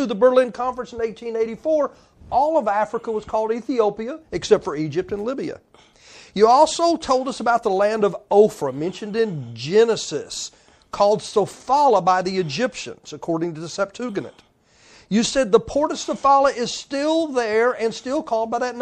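From start to finish the speech carries plainly audible codec damage. S sounds turn watery and chirpy. The cause is likely MP3 compression, which fits a low bitrate near 64 kbps starving weak frequency lines.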